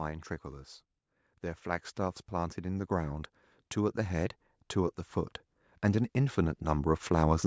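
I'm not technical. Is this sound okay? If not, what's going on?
No, not quite. Three times the whole sound slowly swells louder: from 1.63 to 3.02 s, from 3.74 to 5.07 s, and from 5.82 to 7.42 s, with the last rise the biggest. That's automatic gain rising: the call's volume control decided the input was too quiet and gradually turned it up. Because it boosts everything, the speech and the background noise get louder together over a second or so.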